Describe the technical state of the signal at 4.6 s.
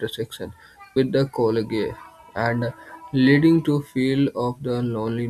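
At 4.6 s the signal is intact, with no audible technical fault at that point.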